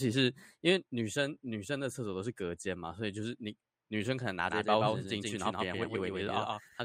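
A speech recording that, from 4.50 s to the end, carries a doubled audio track: a second, full-band copy trails the original by roughly 150 ms at about 5 dB lower, starting abruptly and with no decay or room colour. This likely comes from the same signal being captured twice, once through a slower path.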